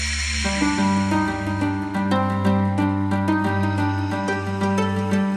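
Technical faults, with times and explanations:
2.82 s and 3.94 s, dropped samples: each moment gives a single sharp click, likely because a couple of samples went missing so the waveform jumps straight to a later value. Far too brief to remove any sound, each shows as a thin vertical line across the spectrogram.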